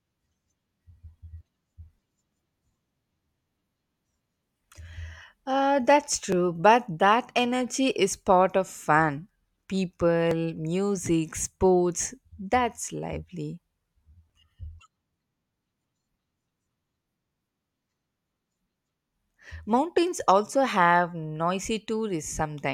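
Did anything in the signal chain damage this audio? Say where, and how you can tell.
Yes. The damage comes at the streaming or playback stage: an overlap between stream segments. Brief clicks or micro-skips land at 2.32, 6.32, 10.31 and 14.30 s, spaced about 4 s apart, which matches a 4-second segment length. At each join, overlapping timestamps cause the player to trim between about 5 and 19 milliseconds of real speech, so the waveform steps abruptly instead of continuing smoothly. On a spectrogram each one appears as a thin vertical broadband line.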